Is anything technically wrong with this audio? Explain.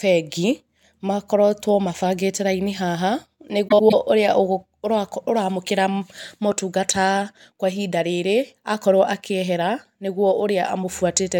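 Yes. From 3.68 to 3.94 s the speech turns into a brief garbled flutter. This is frames out of order: two adjacent blocks of about 104.5 ms, which fits runs of four frames each, were decoded in swapped order, so the stretch plays with its halves exchanged and no time is lost.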